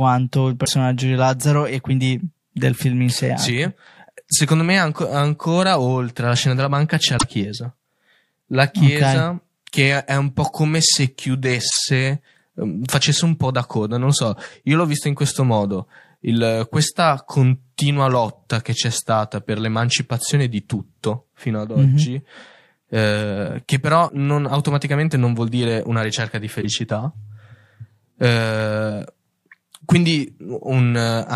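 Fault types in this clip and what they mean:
Damaged data in a compressed stream: at 0.64, 7.15, 11.67, 24.05 and 26.58 s, short bursts of 44 to 110 ms where corrupted bytes make the decoder misread frames, lose sync and hunt for the next valid header, giving brief chirps or squawks.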